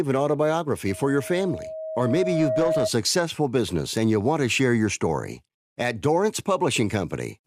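From 0.88 to 2.90 s, ending just before "business and you want", a loudspeaker feedback squeal builds as the microphone re-captures its own loudspeaker and loop gain exceeds unity at 635 Hz. The tone swells over roughly two seconds to about speech level, a brightening horizontal spectrogram line.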